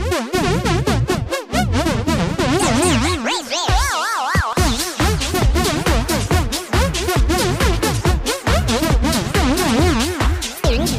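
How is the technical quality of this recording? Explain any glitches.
The recording has one fault: periodic USB or driver dropouts between 4.53 and 9.64 s. Something blocked the audio driver or USB bus at a steady 1.024 s interval, and each time around a millisecond of sound was lost and replaced with silence. This gives a regular train of ticks, one per second. On a waveform each tick is a tiny flat gap. On a spectrogram it shows as a thin vertical broadband line, evenly spaced across that span.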